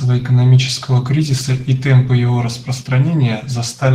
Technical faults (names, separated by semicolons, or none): Opus voice compression